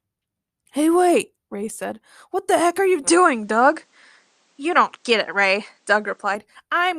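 At 3.07 s, right after "heck are you mm", the sound turns duller with no gap. Nothing passes above 9.3 kHz. Level shifts about 5 dB, and a faint new hiss appears. This likely is an input switched to a poorer device. Full clarity returns at 6.35 s.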